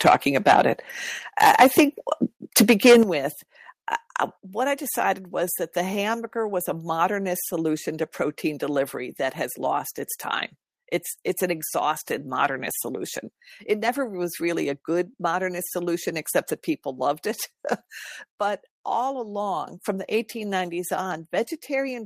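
From 0.05 to 0.62 s the loudest syllables carry a harsh, crackling edge with flattened tops, sitting about 12 dB past the converter's limit. This is likely microphone overload: input volume set too high, so a small share of samples hit the converter's limit and were cut. At 0.08 s the speech and background drop by about 3 dB in one step, likely the call software stepping the microphone volume down after detecting clipping.

A second microphone overload runs from 2.56 to 2.98 s, about 9 dB over and with a much larger share of samples clipped, so the crackle is denser. At 3.03 s the level falls abruptly by about 9 dB, likely a stronger microphone volume step-down following that distorted stretch.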